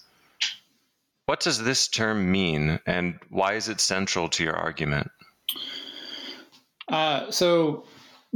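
Gain pumping runs throughout the speech. The gain ducks by about 15 dB under each loud syllable, likely from gain set too high with a fast limiter clamping it. The waveform sits flattened against one ceiling.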